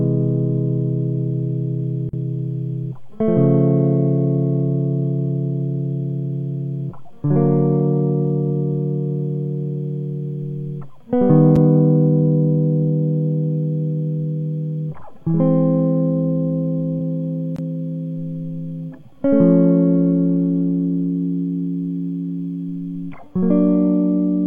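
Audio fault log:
2.09–2.13 s, block of digital silence: a short hole in the music. About 43 ms of samples were replaced by zeros, which fits a 2048-sample buffer not being filled in time, so the sound stops and restarts with no fade.
11.56 s, block of digital silence: a single tick. The dropout lasts only 6 ms, too short to hear as a gap, so the two abrupt edges merge into one click.
17.56–17.59 s, block of digital silence: a brief pop-like hole of about 21 ms, consistent with a missed 1024-sample buffer cutting to zero and back.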